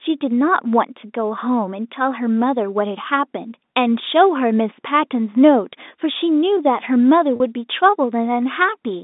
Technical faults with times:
7.36-7.40 packet loss with pitch repetition

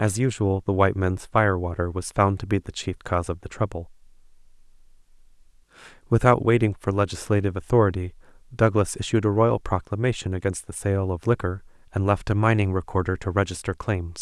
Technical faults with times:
none

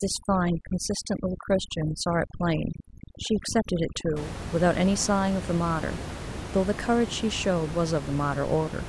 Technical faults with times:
0.00-4.16 overdone noise removal

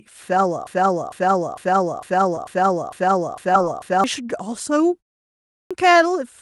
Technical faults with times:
0.67-4.04 broken-record loop
2.35-2.39 short concealed packet loss
3.53-3.56 short concealed packet loss
5.16-5.20 short concealed packet loss
5.38-5.71 clipped start after a pause

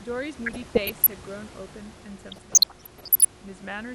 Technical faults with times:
0.46-1.14 DAB burbling
2.26-3.25 DAB burbling

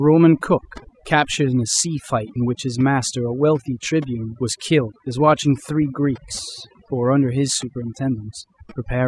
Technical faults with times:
0.00-9.07 overdone noise removal

